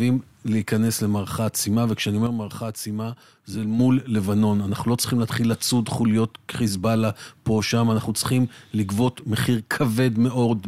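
At 2.27 s the level drops abruptly by about 6 dB, sound and background noise together, then snaps back at 3.79 s. This sudden gain jump is likely a gain change applied without a ramp. The waveform shows a step-shaped envelope, and the spectrogram dims uniformly across all frequencies.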